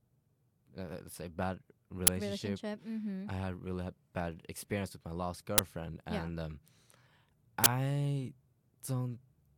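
At 2.07 s, 5.58 s and 7.64 to 7.66 s, uninitialised buffer blocks of 10, 10 and 20 ms play leftover memory, heard as short, loud digital noise bursts.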